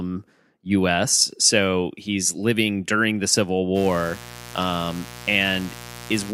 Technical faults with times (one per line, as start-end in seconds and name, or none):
3.73-6.33 mains buzz